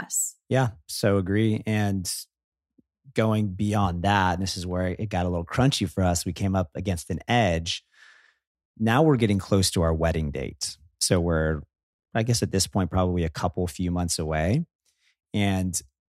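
From 0.39 s to 15.98 s, faint ticks recur at a steady rate, roughly every 0.4 s, about fifty in all. These are clock slip clicks. The likely cause is two devices running on separate, unsynchronised clocks, drifting apart by roughly 70 parts per million. Each time the gap reaches a whole sample, one sample is dropped or repeated. The ticks stand out on loud, sustained speech sounds. They vanish in pauses.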